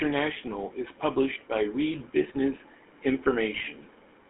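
Speech here, and the whole clip runs through a GSM full-rate codec, with plainly audible damage. The voice has that buzzy, gravelly edge you get when the vocal tract is modelled and driven by a sparse, regular pulse train instead of the real excitation, and it all sits in a narrow phone band of roughly 300 Hz to 3.5 kHz, so there's no air or sparkle on top. The texture fits the old 13 kbps full-rate coder. Then from 3.55 to 3.67 s there's a burst of GSM bit errors. Corrupted filter, pitch and gain values reach the decoder, so for that short stretch the voice turns into a squawky, gargling mess with sudden jumps in level. The length points to roughly half a dozen consecutive 20 ms frames getting hit on a noisy link.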